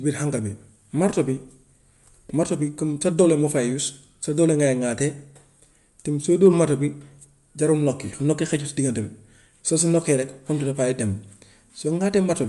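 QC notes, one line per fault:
Throughout: Bluetooth LC3 compression. The speech has nothing above 11.5 kHz and carries a plainly audible breathy, grainy edge across its upper range. The cause is likely LC3, the transform codec used by Bluetooth LE Audio. At a modest bitrate it drops much of the high spectrum and substitutes noise-filled bands, so the top end sounds hashy instead of clean. The character fits 10 ms frames coded at around 48 kbps.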